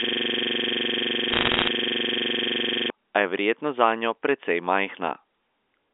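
From the very start until 2.90 s, the audio is a stuck, rasping buzz at about 23.4 Hz rather than moving speech. A 42.67 ms slice repeats exactly, dozens of times, and was already looping when the clip begins. This is a system hang loop: the computer or its audio driver stopped delivering new data while the sound hardware kept replaying the same ring buffer, which fits a 2048-sample buffer.

From 1.30 to 1.68 s, inside that loop, a dense crackle of sharp ticks rides over the repeating slice. These are bit errors on a digital phone line. Around one percent of bits were flipped in the narrowband G.711 A-law stream, and each flip corrupts one sample. Errors landing on a high-order bit, or on the sign bit of a loud sample, throw that sample far off, producing each audible click.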